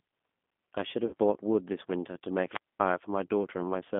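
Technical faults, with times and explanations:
Throughout, G.729 codec: the speech is rebuilt at 8 kbit/s from a vocal tract filter, a pitch predictor and sparse pulses in each frame. It sounds plainly rough and synthetic, confined to a line band of about 200 Hz to 3.5 kHz.
1.07 to 1.15 s, VoIP packet loss concealed by the speech codec: about 60 ms of audio is missing, which fits two lost packets. The decoder extended its last pitch and filter with falling gain, producing a fading smear, and recovery stays weak briefly afterwards.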